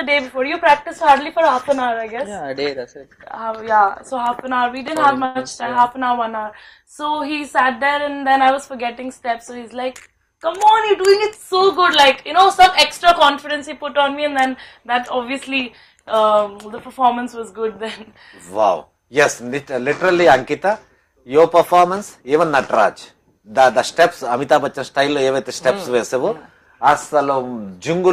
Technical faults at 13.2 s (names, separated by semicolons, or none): jitter buffer speed-up